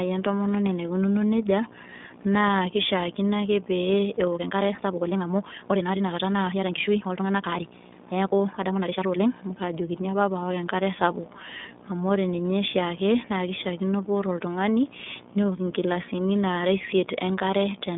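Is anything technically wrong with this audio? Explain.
Yes, three faults are audible.

Throughout, a video or display buzz sits about 20 dB below the speech. A screen or video cable couples its 60 Hz field rate into the audio as a buzz topped with hash, unlike mains hum's smoother tone.

Throughout, the iLBC codec leaves nothing above 3.7 kHz. Each 30 ms frame is coded independently, which fits the 13.33 kbps mode, giving rough, synthetic speech rather than the plain dullness of a simple low-pass filter.

From 4.31 to 9.43 s there is a time-stretched section. The pace jumps to 1.7 times faster while the pitch stays put, sounding rushed. This is likely software dropping short pieces to shorten the audio, unlike a speed change, which would also raise the pitch.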